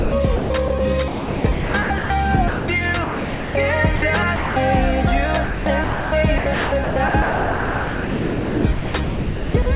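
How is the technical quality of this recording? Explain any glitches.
The recording is repeatedly broken up by voice-detector gating, over a narrowband call path with nothing above 4 kHz.

Sound chopped by the voice detector appears at 0.0–0.8 s, 1.08–2.1 s, 5.44–6.12 s and 6.38–9.66 s. The sender's detector likely kept switching transmission on and off. Gaps were filled with synthetic comfort noise, up to about 2.6 s in the last stretch. The sound turns choppy.

Sound dropped by the voice detector occurs at 2.48–2.68 s, 3.04–3.54 s, 3.96–4.02 s and 4.36–4.56 s. The detector likely mistook quiet sound for background and stopped sending. The receiver played steady comfort noise instead, for up to half a second. Then the sound returns.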